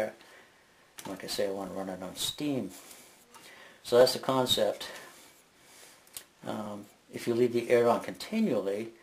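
At 1.67 s and again at 4.01 s there is a small forward jump in the sound, as if a sliver of a few milliseconds has been snipped out and the edges butted together with no gap of silence. Both are most likely a dropped buffer (overrun): the recording software fell behind, the hardware overwrote samples that had not yet been collected, and the sound on either side was spliced directly.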